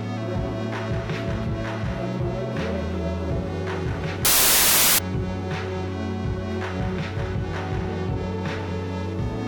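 From 4.25 s to 4.99 s, the music turns into loud, harsh broadband noise. These are samples built from the wrong bytes. The reader misassembles each sample, so the fast-changing low bits become the large part of the value. This lasts about 0.74 s.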